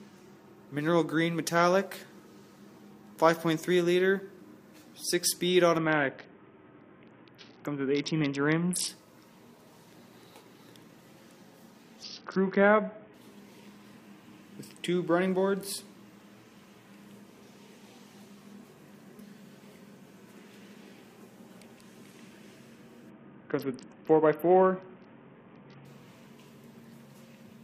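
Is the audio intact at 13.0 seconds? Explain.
No, 13.0 s falls inside a Bluetooth SBC bit pool drop from 12.03 to 13.14 s. The link squeezes the bit pool to around 6 (roughly 55 kbps), so treble goes dull and gritty.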